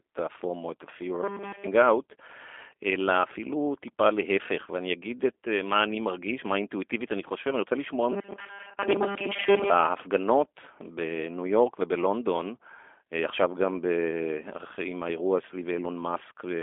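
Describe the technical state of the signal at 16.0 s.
At 16.0 s the speech sounds thin, boxy and slightly rough and synthetic, with no content above about 3.6 kHz. This is G.729 codec damage, present throughout the clip. The codec squeezes the 300 Hz to 3.5 kHz line band to a rate consistent with 8 kbit/s, rebuilding speech from a vocal tract filter, a pitch predictor and a few pulses per frame.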